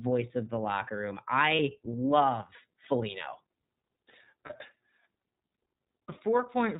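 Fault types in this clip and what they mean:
iLBC codec: A narrowband VoIP codec coding each 30 ms frame independently. Nothing above 4 kHz survives, and the coding roughness is plainly audible, which fits the 13.33 kbps mode.
Lost iLBC frames: At 1.56 s, after "of the locker room", and at 4.46 s, about 30 ms is replaced by a repeated pitch cycle with noise. The sound then recovers immediately.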